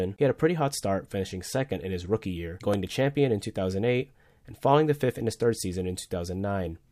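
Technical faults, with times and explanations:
2.74 s, repeated buffer: a single sharp click, too brief to register as a stutter. Fresh audio arrived late, so the output replayed its previous buffer once, about 2.7 ms long, which fits a 128-sample buffer. Each hard join clicks, and a few milliseconds of audio are lost.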